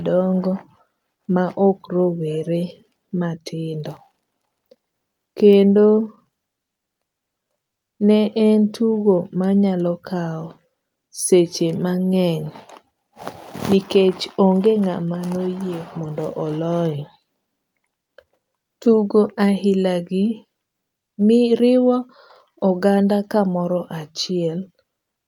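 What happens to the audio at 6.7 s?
Scattered short gaps run from 6.57 to 7.44 s: about five tiny packet losses, none longer than roughly 10 ms, each patched by extending the preceding sound. The speech stays clear but picks up brief ticks and smears. Unlike a single dropout, the holes are spread out and filled rather than left silent.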